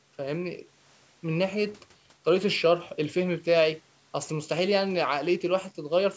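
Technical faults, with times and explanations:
No technical faults: the speech comes through call microphone processing, with nothing above 8 kHz and the lowest bass taken out as normal.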